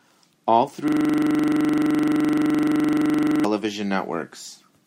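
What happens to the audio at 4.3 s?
Nothing goes wrong at 4.3 s; the speech there comes through intact, with no dropout, click, distortion or other fault.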